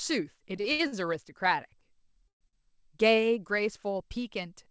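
From 0.56 to 0.94 s the speech shows repeated stalls (stutter): four separate holds, the longest about 70 ms, adding up to 160 ms, so roughly two fifths of that stretch is filled-in sound rather than fresh audio. Packets kept arriving behind schedule, the jitter buffer emptied again and again, and each time the receiver extended the last sound before carrying on. Nothing is lost, but the passage drags and judders. What sets it apart from a freeze is the repetition of short holds rather than one long one.

Between 2.28 and 2.43 s there is a single call audio freeze lasting about 128 ms. The last sound is carried on briefly and then dies away, leaving about 100 ms of silence before the speech resumes exactly where it stopped. The likely cause is packets held up in transit long enough to drain the jitter buffer completely. It differs from the stutter in being one continuous gap deep enough to fall silent, and nothing is missing afterwards.

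Right after, from 2.49 to 2.55 s, comes a short stall from a late packet. For about 42 ms a single sound is stretched, with a faint buzzy smear, while the receiver waits for one overdue packet, and then playback continues from the same point with nothing skipped. It is far shorter than the freeze and never reaches silence, which is how it is told apart. Throughout the clip the call path's bandwidth ends at 8 kHz, consistent with G.722 at 64 kbps.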